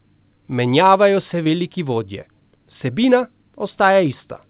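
A brief smear at 1.44–1.47 s and again at 2.21–2.25 s: short concealed packet loss, where about 20 ms of audio arrived too late and the receiver filled the gap by extending the preceding sound.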